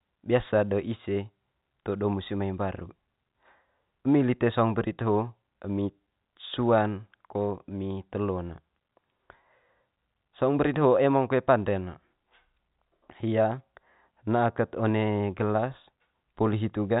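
No technical faults are audible.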